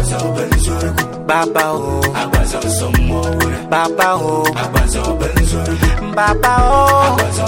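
From 3.07 s to 7.38 s a train of clicks runs over the sound: about twenty near-identical pulses at a regular 4.19 per second, peaking roughly level with the signal. Likely caused by nearby equipment interference or a faulty connection or power supply, its steady, uniform ticking sets it apart from random crackle.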